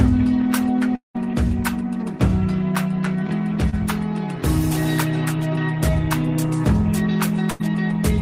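From 0.95 to 1.16 s the sound trails off into a fading continuation and then drops to about 130 ms of near silence before returning, with roughly 200 ms of material skipped. This is likely a long network dropout, with the receiver stretching the last sound for about 190 ms before giving up.

At 3.70 to 3.74 s there is a brief smear, a wobble where about 20 ms of audio is gone. That is short concealed packet loss: the receiver extended the preceding sound for about 27 ms to bridge the hole, then blended back into the real signal.

Between 7.50 and 7.62 s the sound freezes into a held, dimming continuation for about 93 ms, then jumps ahead past roughly 100 ms of missing audio. This is a burst of packet loss, with consecutive packets lost or arriving too late and the receiver fading a continuation of the last sound across the gap.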